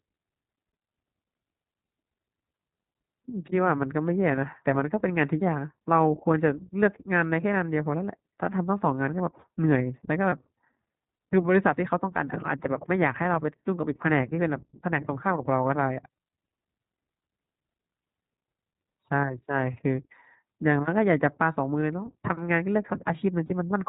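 iLBC codec coding runs from the first second to the end, band-limiting the speech to below 4 kHz and coding each 20 ms frame independently. The plainly audible damage is a slightly rough, synthetic texture, which fits iLBC's 15.2 kbps mode.

Lost iLBC frames occur at 4.36–4.39 s, 10.30–10.33 s and 23.46–23.52 s. Each gap is filled by the decoder repeating the last pitch cycle blended with noise, heard as a brief buzzy, held vowel. The first two gaps fit one 20 ms frame each, and the last fits two frames, about 40 ms. The speech recovers immediately after each gap.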